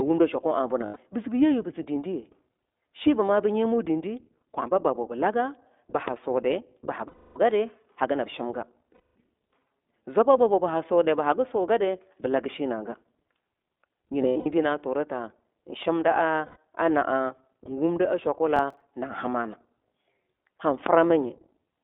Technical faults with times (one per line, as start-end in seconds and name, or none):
0.00-21.83 iLBC codec
0.86-0.98 lost iLBC frames
6.08-6.10 loud pop
7.08-7.38 lost iLBC frames
8.94-9.13 lost iLBC frames
14.22-14.46 lost iLBC frames
16.45-16.57 lost iLBC frames
18.56-18.82 processor overload crackle
20.86-20.89 loud pop